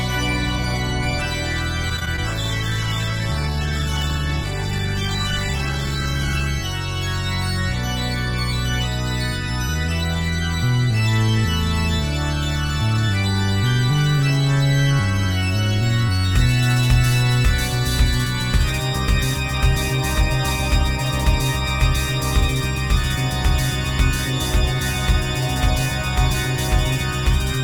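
The audio shows three call-transport faults. From 1.89 to 2.20 s there is repeated packet loss with a robotic sound: five short gaps, the longest 17 ms, are each bridged by extending the preceding sound, so about a fifth of that stretch is synthetic fill and it sounds choppy. Straight after, from 2.28 to 6.55 s, a call bitrate drop takes the encoder from 48 to 12 kbps, holding the minimum for about 4.2 s. At that rate Opus quantises coarsely and trims the upper band, so the sound turns rough, watery and muffled until the rate recovers. From 9.74 to 10.16 s a jitter buffer speed-up occurs: the receiver, holding more audio than its target, cuts roughly 50 ms of pitch-period segments in quick succession. Playback runs at 109% speed without a pitch change, and the passage sounds hurried.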